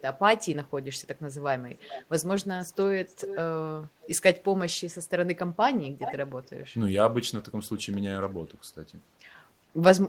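Echo leak appears at 1.79–2.06, 3.09–3.38, 4.01–4.07, 5.83–6.15 and 6.43–6.49 s as copies of the speech arriving about 0.42 to 0.44 s late and roughly 10 to 35 dB below it. This is likely loudspeaker pickup the echo canceller missed. Spectrograms show weaker, time-shifted duplicates of earlier harmonic patterns.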